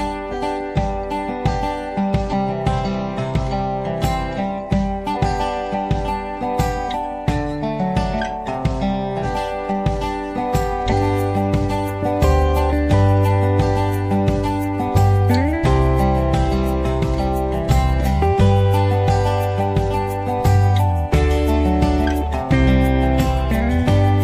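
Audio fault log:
0.28–0.34 s, 2.28–2.33 s, 5.11–5.18 s, 9.20–9.25 s and 10.87–10.93 s: damaged data in a compressed stream. Five brief glitches, each a chirp, squawk, click or short hole, break into the sound, each about 55 to 65 ms long. At each point, some of the compressed data is wrong. The decoder cannot read those frames properly. It loses sync and hunts for the next valid frame header. The garbled output or gap while it searches is heard as a short disruption.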